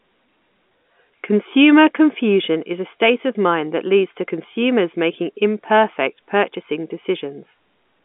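There are no technical faults to describe in this speech clip.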